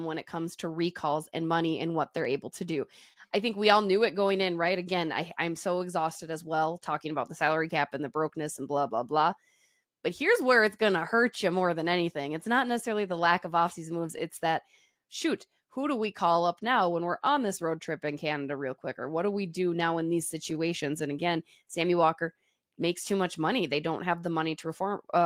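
This speech clip suffers clock drift between sender and receiver: the sender's clock runs roughly 3 percent slow, so the receiver's jitter buffer keeps draining throughout the recording. The receiver's response is repeated timing corrections from 0.02 to 24.9 s, stretching playback to 98 percent speed and adding about half a second, heard as an unsteady, slightly dragging tempo with faint hiccups. At 3.13 to 3.18 s a packet arrived late, a short stall from a late packet, so the buffer ran empty and the receiver held the last sound for 28 ms, causing a brief held sound without losing anything. Between 18.06 and 20.53 s come scattered short gaps, about three brief holes, the longest only a few milliseconds and roughly 20 ms in all, each patched by continuing the previous sound and heard as tiny ticks or smears.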